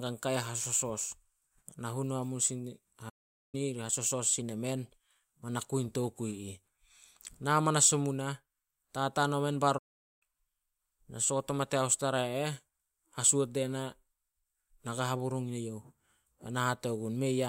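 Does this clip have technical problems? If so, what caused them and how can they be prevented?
Yes. The speech cuts to silence mid-flow twice, from 3.09 to 3.55 s and from 9.78 to 10.23 s, each gap lasting about 0.43 to 0.44 s before resuming. This is a playback stall, likely from the player's buffer running dry or its audio thread being blocked. A larger playback buffer and a high-priority audio thread prevent it.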